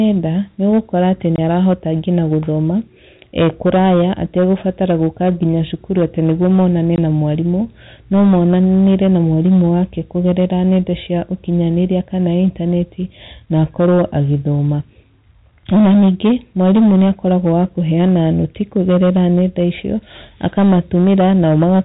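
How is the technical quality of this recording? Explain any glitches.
The recording has two technical problems: hard clipping across the whole clip and two short dropouts from packet loss.

Hard clipping runs from start to finish. The level was pushed about 9 dB past what the signal chain could pass, so the loudest parts of the speech, roughly one sample in twenty, had their peaks sliced flat. Those flat tops create added harmonics, heard as a crackly, gritty edge on the peaks. The fuzz tracks loudness and vanishes in quiet passages, which separates it from steady background noise or codec hiss.

Packet loss filled with silence occurs twice, from 1.36 to 1.38 s and from 6.96 to 6.98 s. Each gap lasts 20 ms, which fits a single lost packet. Nothing was substituted for the missing audio, so the speech drops abruptly to dead silence, with hard edges. Concealment would instead stretch or repeat nearby sound to bridge the gap.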